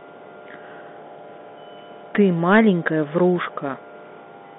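From start to finish the speech carries Bluetooth CVSD headset codec damage. Energy sits between about 150 Hz and 3.5 kHz, consistent with a 64 kbps one-bit delta stream, whose adaptive step lags loud high-frequency peaks, leaving scratchy s sounds and a granular hiss beneath.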